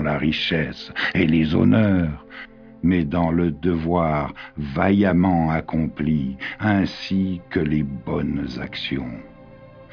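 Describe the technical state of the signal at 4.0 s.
At 4.0 s the signal is intact, with no audible technical fault.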